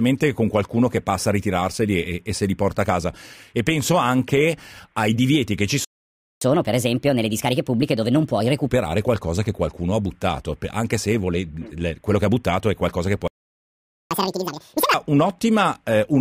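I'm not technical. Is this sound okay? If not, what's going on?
No. Two playback stalls, at 5.85 to 6.41 s and 13.28 to 14.11 s, cut the speech off mid-flow for about 0.57 s and then 0.83 s. The likely cause is the player running out of audio data, or being held up internally, so it fell silent until it could continue.

Each stall is followed by catch-up at higher speed. From 6.41 to 8.69 s the speech plays 1.25 times faster, raised roughly four semitones. From 14.11 to 14.94 s it runs at double speed, about ten semitones higher. The player is rushing through what it fell behind on.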